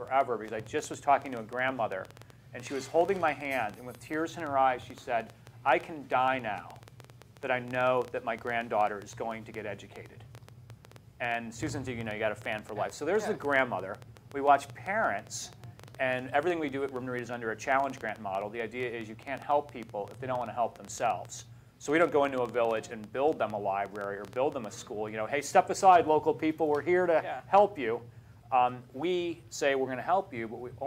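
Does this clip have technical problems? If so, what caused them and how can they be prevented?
Yes. A train of clicks, around two hundred irregularly spaced pulses at about 8.2 per second, runs from 0.08 to 24.65 s, peaking about 5 dB above the sound. It is likely interference or a faulty connection or power supply. Shielding cables and stabilising the interface prevent it.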